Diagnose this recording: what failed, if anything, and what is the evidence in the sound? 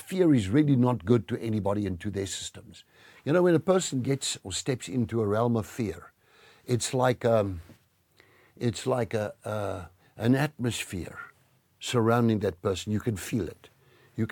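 Nothing in this speech recording points to a failure at any stage of the chain. Every part of the signal path sounds as it should, with nothing to diagnose.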